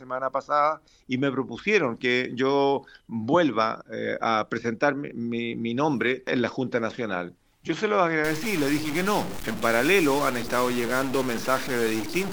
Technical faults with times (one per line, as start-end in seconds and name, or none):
8.24-12.33 stuck bit